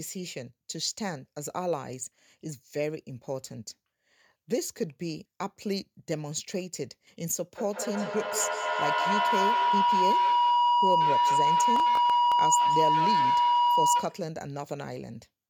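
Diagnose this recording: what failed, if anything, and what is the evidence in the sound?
Feedback howl from 7.58 to 14.31 s, in the call's acoustic path. A tone near 1 kHz swells to about 6 dB above the speech, with the loop delay roughly 200 ms. Microphone and loudspeaker share a room, so each trip round the loop adds gain and narrows toward that frequency.

Processor overload crackle from 11.76 to 12.32 s, at the driver or buffer stage. A gritty burst rides on the howl, made of hard-edged dropouts to silence. The processor missed a run of deadlines on very short buffers, around 1.5 ms each, leaving brief empty gaps.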